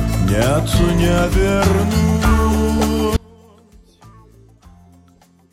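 At 3.17 s the audio drops out abruptly to a faint residue about 30 dB down and stays there to the end, likely a lost signal on a live path; waveform collapses, spectrogram fades to a dim trace.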